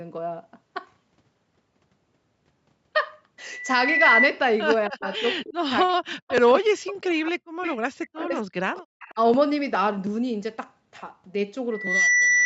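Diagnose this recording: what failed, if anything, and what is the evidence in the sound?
Speech suppressed in double talk, in the call processing: the level dips by up to about 40 dB at 4.89–7.57, 7.97–8.62 and 9.12–9.18 s, likely from the echo canceller ducking both talkers.

Echo leak, also in call processing: a copy trails 258 ms behind at 5.06–5.53, 6.28–6.51, 7.63–7.76 and 8.75–9.13 s, about 15–25 dB down, likely residual loudspeaker echo.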